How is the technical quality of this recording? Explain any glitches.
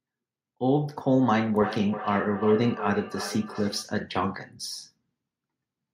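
The recording has one clear glitch, a stretch of feedback echo between two devices from 1.54 to 3.87 s. A second device in the same room is playing this call aloud, and the microphone picks that playback up again, which its own echo canceller cannot remove. The speech comes back at a fixed interval of roughly 0.4 s, with the repeats peaking at about 11 dB below the direct speech and sounding thinner and more ringing than the original.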